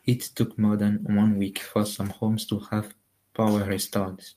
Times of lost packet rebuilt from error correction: 1.23-1.25

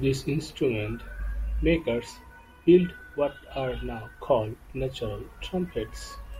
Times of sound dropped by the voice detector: none

